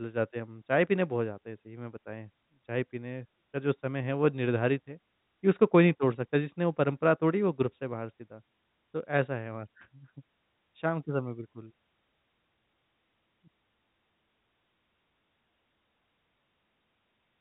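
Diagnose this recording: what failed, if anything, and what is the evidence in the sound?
Nothing has gone wrong here: the speech sounds like ordinary G.711 telephone coding doing its job, with the top end stopping around 3.9 kHz just as that narrowband phone path should, and there's nothing else in the sound that needs explaining.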